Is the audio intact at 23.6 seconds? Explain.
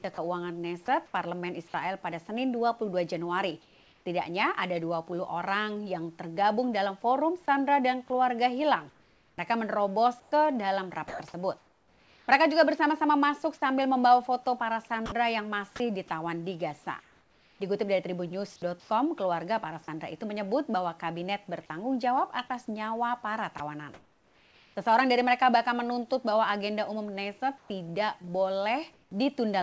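No. At 23.58 s a brief piece of sound, about 20 ms, gives way to steady noise, likely sound dropped by the voice detector, which mistook it for background and stopped sending. From 23.58 to 24.76 s the real background is replaced by flat, featureless comfort noise in place of the background, likely synthesised by the receiver while transmission paused.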